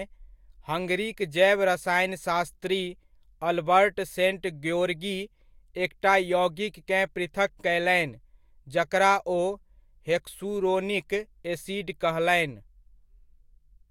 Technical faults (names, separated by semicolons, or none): none